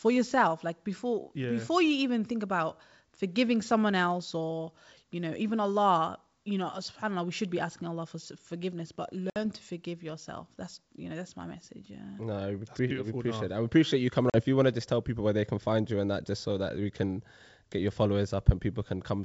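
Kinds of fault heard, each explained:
packet loss on an ADPCM call: abrupt silent holes at 9.30 s, before "to forgive yourself that's", and 14.30 s, after "i appreciate you coming", each followed by a brief, slightly rough restart. Lost packets (60 and 40 ms) briefly desynchronised the decoder's predictor and step size.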